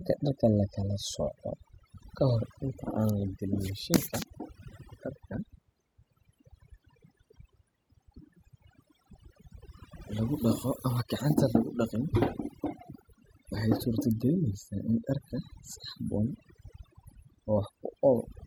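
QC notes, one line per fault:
throughout, overdone noise removal: a noise reduction stage set too aggressively keeps muting individual frequency bands it judges to be noise, taking the softer parts of the voice along with them, so the background drops and breaks up into twinkling specks.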